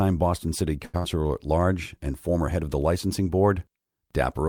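A speech recording with two network faults close together near the one-second mark. First comes a short stall from a late packet, from 0.85 to 0.96 s. A packet arrived after its playout time and the jitter buffer ran dry. The receiver held the last sound for about 83 ms while it waited. Nothing is lost, and playback picks up from the same point. The held sound has a frozen quality with a faint buzz or dip, and everything after it runs that much later. Right after, from 0.98 to 1.05 s, there is a burst of packet loss. Several packets in a row never arrived in time. The receiver filled about 56 ms by extending the last sound and fading it. It then jumps ahead, and about 80 ms of speech is missing. That skip takes back part of the earlier delay, so playout ends up roughly 24 ms less behind.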